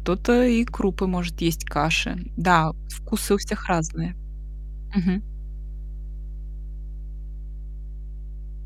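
A mains hum at 50 Hz runs from start to finish beneath the speech, sitting roughly 10 dB below it, which is loud enough to stay audible through the pauses and under the quieter passages. The power-line frequency has leaked into the signal path, most plausibly through a ground loop between connected equipment or magnetic pickup from a nearby transformer. It is heard as a constant, low, buzzing tone that does not change with the talker.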